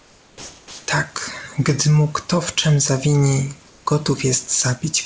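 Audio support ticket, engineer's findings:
Comfort noise in place of the background, 0.00–0.88 s and 3.68–3.86 s. Likely discontinuous transmission: sender's voice detector gated off the quiet background, receiver synthesised filler noise. Real room tone, sitting about 32 dB below the loudest passages, replaced by steady, featureless hiss. First gap at matching level; second about 4 dB quieter, a brief dip in the floor before sound resumes. Call path band-limited, nothing above 8 kHz, consistent with G.722.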